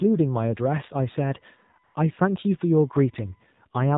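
From the start, the speech carries plainly audible damage from the AMR narrowband mobile codec. Nothing above 4 kHz survives, so the top end is missing and sibilants lose their edge. The codec rebuilds the voice from a vocal-tract model excited by a few pulses per subframe. At this low rate the result is buzzy and synthetic, and the degree of coarseness fits a 7.4 kbps mode.

From 1.84 to 1.94 s, AMR comfort noise fills a 100 ms gap. The encoder judged the talker silent and stopped sending speech frames. The receiver then generated noise from a rough description of background level and spectrum. The real ambience is briefly swapped for a smooth, steady hiss that switches in and out.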